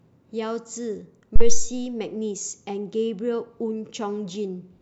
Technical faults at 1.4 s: phantom power thump

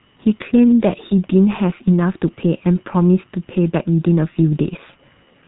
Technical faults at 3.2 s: G.723.1 codec

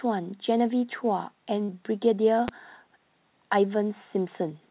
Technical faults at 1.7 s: short concealed packet loss

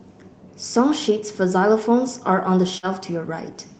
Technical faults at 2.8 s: burst of packet loss

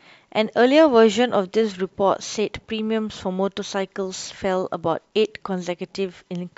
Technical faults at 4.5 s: none

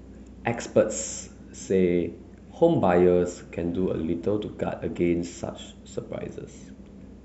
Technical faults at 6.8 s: none

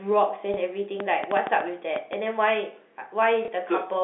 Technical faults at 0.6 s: packet loss with last packet repeated

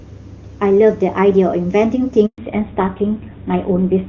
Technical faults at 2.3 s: handover gap; fallback to narrowband

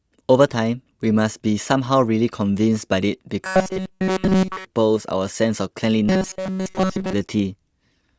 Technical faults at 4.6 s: robotic sound from repeated short buffers

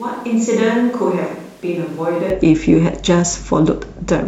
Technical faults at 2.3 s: switch to a distant microphone

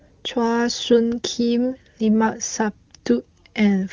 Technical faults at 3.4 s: none

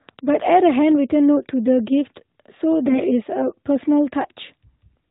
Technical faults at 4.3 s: none

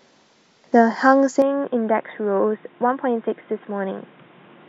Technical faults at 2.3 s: input switched to a poorer device

